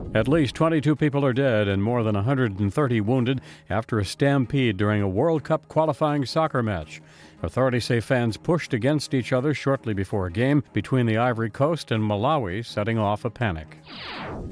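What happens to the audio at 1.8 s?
Nothing goes wrong at 1.8 s: the audio plays through that moment intact, with no dropout, click, distortion or other fault.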